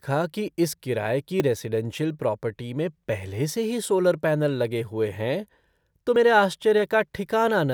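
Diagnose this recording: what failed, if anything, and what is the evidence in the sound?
The speech jumps abruptly at 1.4 s, just after "कि इस किराये की", and again at 6.16 s, with no gap. This points to a dropped buffer (overrun) at the driver or buffer stage, likely from the capture buffer being overwritten before it was read. Roughly 20 ms and 40 ms of audio are skipped. A waveform would show a sudden discontinuity, and a spectrogram a thin full-band vertical line at each splice.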